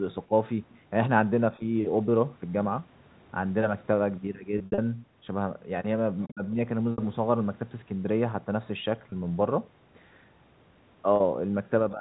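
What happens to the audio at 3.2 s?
Nothing goes wrong at 3.2 s: the speech there comes through intact, carrying only the narrow telephone band of the G.711 call path it travels through.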